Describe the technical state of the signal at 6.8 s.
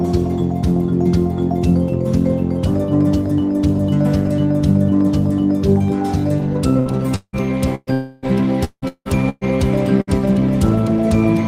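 Right at that point there's a burst of packet loss, running from about 6.79 to 6.89 s. A short run of packets never made it in time, so the receiver filled roughly 62 ms by stretching the last bit of sound and letting it fade down. When the audio picks up again, about 60 ms of material is simply gone. What you hear is a brief smeared, decaying tail followed by a slight jump forward.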